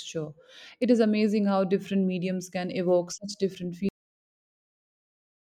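At 3.89 s, just after "can evoke such different", the speech stops mid-sound in a cut-off end: the final buffers were never written, so audio drops straight to digital silence without decay. The waveform flatlines abruptly; the spectrogram shows energy ending in a hard vertical edge.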